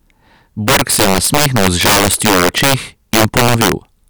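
Throughout the speech, integer overflow: with about 12 dB too much gain, peaks that should have been limited wrap to the opposite sign, around one sample in twenty. Violent cracks mark loud moments, far sharper than clipping. The waveform shows full-range vertical jumps, and the spectrogram shows broadband vertical streaks.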